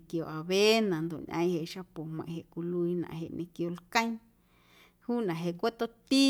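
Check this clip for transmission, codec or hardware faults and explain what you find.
Nothing wrong can be heard anywhere in this speech.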